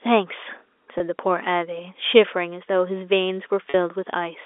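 A slightly held, buzzy sound at 0.98 to 1.00 s, and again at 3.70 to 3.74 s, is packet loss with pitch repetition. About 20 ms and then 40 ms of audio were lost, and the receiver bridged each gap by repeating the last pitch period.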